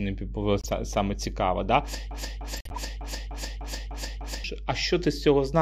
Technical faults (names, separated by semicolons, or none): mains hum; corrupt frame decoded; broken-record loop